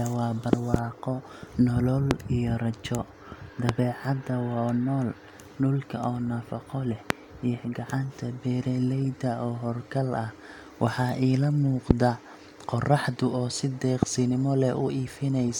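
Loud pops cut through the speech: a double pop at 0.53–0.77 s, then single pops at 2.11, 3.69, 7.10, 11.91 and 14.03 s, roughly 20–25 dB above it. The speech carries on underneath. Each is likely a brief voltage pulse from a switch, plug or static.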